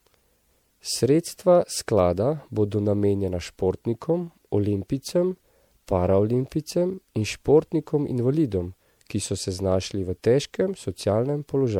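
Throughout, generation loss gives the speech a swirly, hollow smear with blurred consonant onsets, likely from repeated MP3 re-encoding around 96 kbit/s a few times; spectrograms show accumulating holes.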